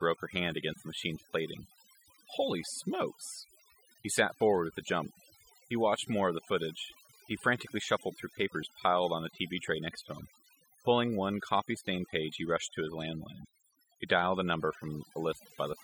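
Overdone noise removal runs throughout the speech. The noise reduction was set too aggressively, cutting individual frequency bands whenever they came close to its noise estimate. Quieter parts of the voice were removed too, leaving near-silent gaps with twinkling specks.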